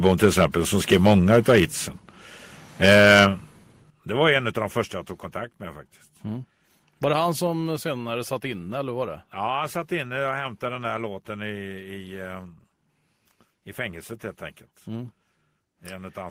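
From 0.05 to 0.45 s and again from 2.84 to 3.26 s, loud syllables crackle harshly with flattened tops, about 6 and then about 8 dB over full scale. This is likely microphone overload, with the second burst clipping far more of the waveform. At 2.9, 3.9, 4.92 and 7.47 s, speech and background drop together by about 2, 10, 4 and 4 dB. These are most likely microphone volume stepped down by the call software.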